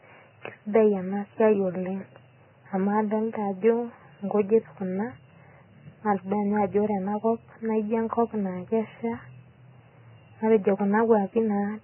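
From start to finish the speech is band-limited and grainy, likely from heavy Vorbis compression at a rate that fits roughly 10 kbps: nothing reaches above 3 kHz, and coarse quantisation turns remaining detail into hiss, smearing consonant onsets. A spectrogram shows a flat ceiling at 3 kHz with mottled, noisy texture below.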